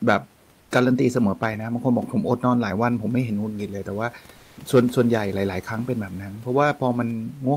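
At 0.61 s the room noise behind the speech gives way to comfort noise in place of the background for 100 ms. It is smooth and featureless, and about 5 dB quieter. At 4.37 s it happens again for 200 ms, this time at the same level. The likely cause is Opus discontinuous transmission. The sender pauses in these gaps, and the receiver fills them with synthetic noise. The real room detail returns once the gap ends.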